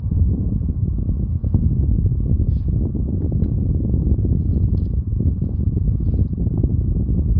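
No technical faults are audible.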